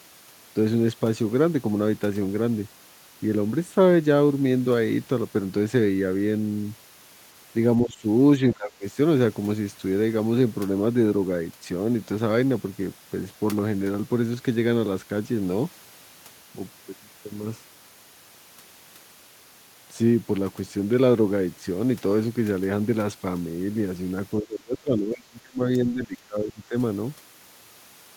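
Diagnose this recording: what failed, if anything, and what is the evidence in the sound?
Speech suppressed in double talk at 7.84–8.05 s, 8.54–8.85 s and 24.4–26.75 s. The speech sags by roughly 15 to 25 dB, and the last stretch lasts about two seconds. The fault sits in call processing, likely an echo canceller that mistook the near talker for loudspeaker echo and turned both down.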